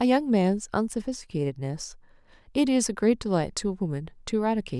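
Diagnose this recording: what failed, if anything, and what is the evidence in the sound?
Nothing in the signal chain can be heard to fail here: the speech arrives continuous and intact, with no audible damage at any stage between capture and playback.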